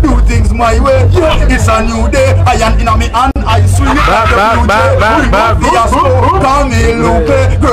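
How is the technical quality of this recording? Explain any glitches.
The recording has one audible glitch, a gap at a join of encoded pieces at 3.31 s. Two separately encoded segments were butted together with their encoder start delay and final-frame padding left in, so a 46 ms silence cuts through continuous sound with smeared edges before it resumes where it stopped.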